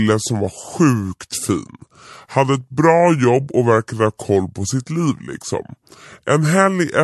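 Wrong sample rate throughout: the speech runs slow and deep, at 0.726 times speed and 5.55 semitones low, which fits 44.1 kHz audio played unconverted at 32 kHz.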